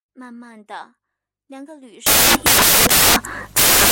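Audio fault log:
2.07–3.91 s, samples built from the wrong bytes: The speech gives way to loud broadband noise that runs to the end of the clip. The reader is assembling each sample from the wrong bytes. It may be off by one byte, swapping their order, or assuming the wrong alignment. The rapidly changing low bits end up as the largest part of every value. That turns the signal into harsh broadband hiss.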